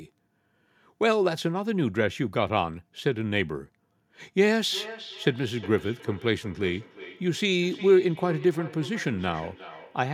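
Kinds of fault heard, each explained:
Feedback echo between two devices: from 4.57 s onward, the speech returns roughly every 0.4 s, peaking about 16 dB below the original, because a second device's playback is picked up again by a microphone whose echo canceller can't remove it. Waveform and spectrogram show fainter duplicate syllables at that fixed offset.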